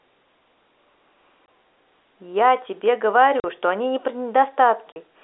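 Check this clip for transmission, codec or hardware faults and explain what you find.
Three short dropouts stand out, each a sudden hole in the speech with hard edges. They come at 1.46 s, at 3.40 to 3.44 s, and at 4.93 to 4.96 s. This is packet loss filled with silence. The first gap is 20 ms, which fits one lost 20 ms packet, and the later two are 40 ms, which fits two packets in a row. Instead of smoothing over the missing audio, the receiver inserted silence. The abrupt cut to silence and back gives the gaps their hard edges. The speech still carries the narrow telephone band of G.711 coding, roughly 250 Hz to 3.7 kHz.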